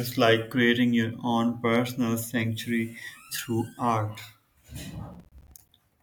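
From 5.14 to 5.69 s, near the end of the speech, there is a burst of processor overload crackle. The processor fell behind and missed a run of buffer deadlines. Each miss dropped a short stretch to silence with hard edges. The gaps sound like buffers of about 10 ms, and the pattern suggests around fifteen missed. Together they form a gritty, tearing crackle over the speech. It stops once the load eases.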